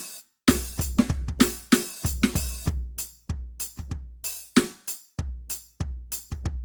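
Across the whole music clip there is generation loss. The sound is swirly, smeared and hollow, and attacks blur. It likely comes from about seven passes through Opus at 48 kbit/s. Each pass requantises on a shifted frame grid, so noise and spectral holes pile up.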